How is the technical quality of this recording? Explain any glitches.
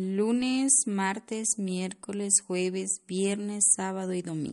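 The recording has clearly audible compression damage across the whole speech clip. The likely cause is MP3 compression at a bitrate low enough to fit about 48 kbps, which starves the encoder of bits. It discards everything above 11.2 kHz and lets faint frequency detail flicker between frames, so the speech sounds dull, watery and swirly, with smeared consonant attacks and metallic s sounds.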